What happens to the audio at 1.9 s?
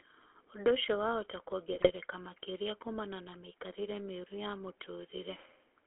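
At 1.9 s the sound is at the tail of a burst of GSM bit errors running from 1.72 to 1.91 s. Corrupted bits reached the decoder, scrambling the filter, pitch and gain values for a handful of frames. The spectrum warps and the level jumps, so the speech breaks into squawks, pops and gargling that stop around 1.91 s.

Underneath, the GSM full-rate codec shapes the whole clip. Its sparse pulse excitation gives the speech a buzzy, gravelly roughness, which fits the 13 kbps full-rate coder. The line band runs from 300 Hz to 3.4 kHz, so there are no lows or highs outside it.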